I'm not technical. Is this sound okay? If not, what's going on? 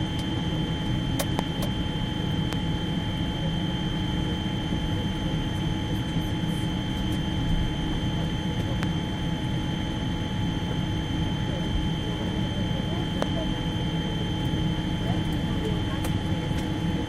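No. Four loud pops jump out of the sound, at 1.39, 2.53, 8.83 and 13.22 seconds, the last a little less strong. Each is a single sharp click, likely from a sudden electrical jolt such as a plug, switch or static, while the sound continues underneath.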